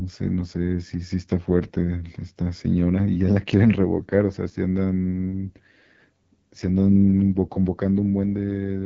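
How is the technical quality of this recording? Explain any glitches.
The technical quality is limited by audible low-bitrate coding across the whole recording.

Throughout the clip the speech carries AMR wideband (HD Voice) codec damage. The coder models the vocal tract driven by sparse pulses, and at this grade of roughness it points to one of its two lowest modes, consistent with about 8.85 kbit/s. Too few pulses leave voiced sounds rough and raspy. On a spectrogram, harmonics look smeared and grainy below 6.4 kHz, the 6.4 to 7 kHz strip shows featureless noise, and nothing appears above 7 kHz.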